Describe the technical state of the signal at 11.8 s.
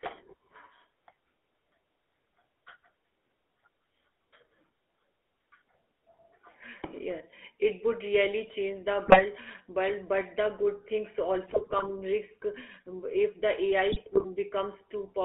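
At 11.8 s the sound breaks into squawks, pops and gargling, part of a burst of GSM bit errors running from 11.46 to 11.87 s. Corrupted bits reached the decoder, garbling filter, pitch and gain values so spectrum and level lurch frame by frame, consistent with roughly twenty damaged frames.

Underneath, the whole clip carries the buzzy, gravelly roughness of the GSM full-rate codec, band-limited to about 300 Hz to 3.5 kHz. The codec rebuilds sound from a vocal-tract model driven by sparse regular pulses, a coarse excitation that fits a 13 kbps stream.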